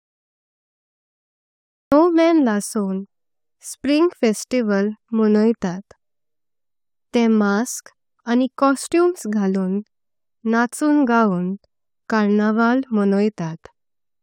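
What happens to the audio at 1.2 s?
At 1.2 s there is nothing but digital silence. This is a cut-off start. The clip is dead silent from 0 to 1.92 s, and the speech then cuts in abruptly in the middle of a sound. The capture began late, so whatever was being said before that point was never recorded. The silence is padding, not a pause. When the audio arrives at 1.92 s, it has no natural attack or fade-in.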